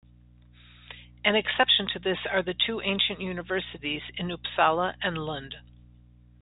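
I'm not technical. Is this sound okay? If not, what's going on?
Yes, nothing has gone wrong with this recording. It has the narrow sound of an ordinary landline call because it passed through G.711 telephone coding, which keeps nothing above about 3.8 kHz, and that is normal for a phone line.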